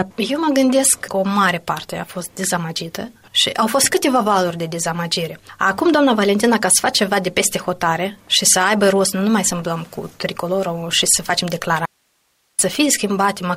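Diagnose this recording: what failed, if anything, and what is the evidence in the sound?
Audio dropout to a faint residue from 11.86 to 12.59 s: an abrupt cut to hiss roughly 45 dB down, likely an analogue wiring break ahead of a live input.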